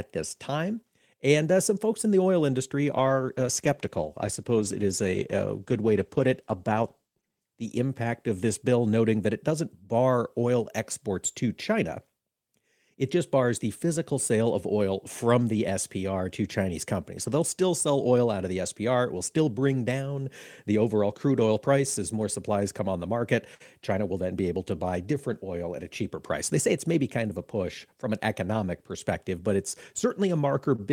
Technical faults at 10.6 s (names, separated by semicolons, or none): none